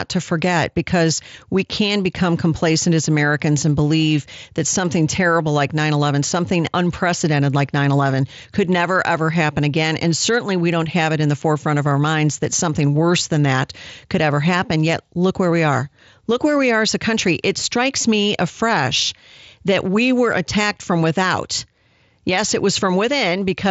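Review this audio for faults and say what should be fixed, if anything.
Nothing needs fixing; no faults can be heard.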